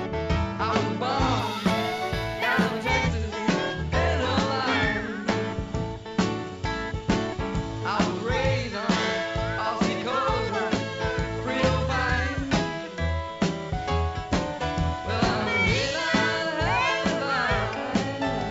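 From 1.39 to 2.89 s there is imaging from linear upsampling. The top of the band sounds dulled, with a faint metallic shimmer above it, which points to a 16 kHz source raised to 44.1 kHz by straight-line interpolation. A mirrored image sits around 8 to 16 kHz, roughly 30 dB down.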